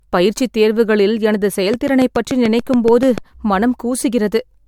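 Speech with generation loss throughout. It sounds swirly, hollow and smeared, and attacks blur. Likely cause: about three MP3 passes near 104 kbit/s, with nothing above 20 kHz. From 1.74 to 3.19 s a train of clicks ticks over the sound. About ten regular pulses arrive at 6.9 per second, peaking about 10 dB above the signal, likely interference or a faulty connection.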